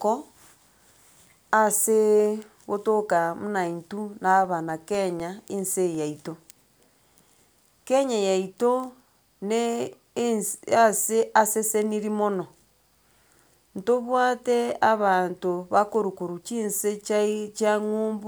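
From 4.20 s to 7.70 s the speech carries periodic USB or driver dropouts: a regular tick every 0.25 s, four per second, about fifteen in all. Something is stalling the audio driver or USB transfer on a fixed schedule, and each stall drops around a millisecond of signal, replaced by silence. The abrupt gap in the waveform produces a small click, audible only where speech is present.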